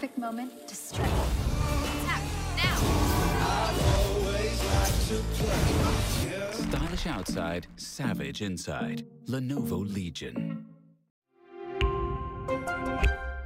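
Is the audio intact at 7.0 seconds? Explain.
No: a jitter buffer speed-up runs from 6.82 to 9.10 s. The receiver trimmed short pitch-period-length pieces again and again to drain excess buffered delay, about a fifth of a second in all, so the sound plays about 9% fast at unchanged pitch and feels hurried.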